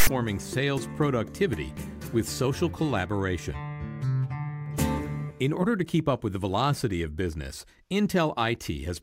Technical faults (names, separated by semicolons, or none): file tags played as audio